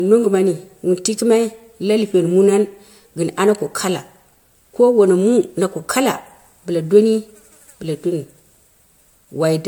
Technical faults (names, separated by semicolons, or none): generation loss